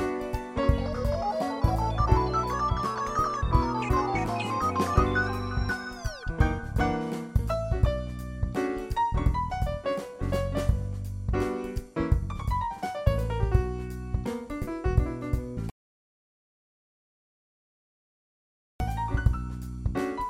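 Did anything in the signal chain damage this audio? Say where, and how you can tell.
Yes: an audio dropout to silence, likely a lost input connection upstream of the recorder, writes silence from 15.7 to 18.8 s, cutting the sound abruptly with no room tone.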